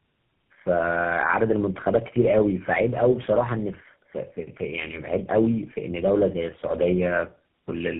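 From start to finish the speech carries tandem speech coding: it sounds like it was decoded and squeezed again by about three low-rate speech codecs in a row, which fits a chain like AMR-NB, then G.729A, then GSM full rate. Each stage models the previous one's errors as if they were real speech, so it's rough, muffled and warbly, with nothing above 3.8 kHz.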